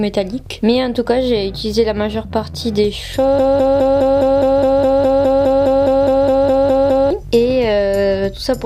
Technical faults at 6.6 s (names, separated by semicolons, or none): broken-record loop